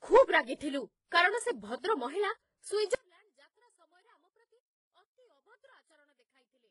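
Transcoding between lossy codecs runs through the whole clip. The speech is likely passed through a very low-rate codec first and re-encoded at a higher rate, so coarse swirly artefacts sit under newer encoding grit, and nothing survives above 11.1 kHz.

One channel inverted begins at 2.95 s and lasts to the end. With one side likely flipped in polarity, the shared centred speech cancels when the channels are summed to mono, dropping by about 36 dB and leaving only a faint residue.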